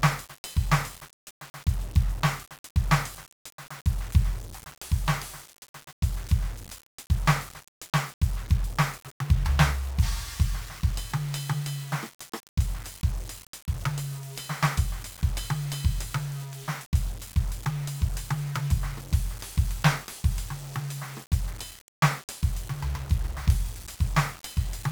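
From start to finish the music carries heavy 1-bit DFPWM compression damage. Each sample keeps only one bit, which nudges a self-adjusting level up or down, so the waveform is traced in coarse steps and strong broadband quantisation noise rides on everything. The result is a fuzzy, crackling texture with the treble sunk under hiss. Unlike the swirly, band-limited artefacts of a low-bitrate perceptual codec, this noise is evenly spread and constant, pointing to a stream around 48 kbps.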